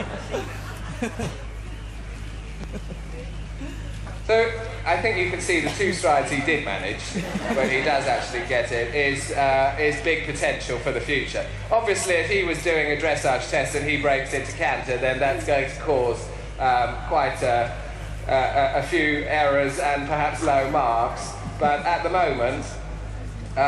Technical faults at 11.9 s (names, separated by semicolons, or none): none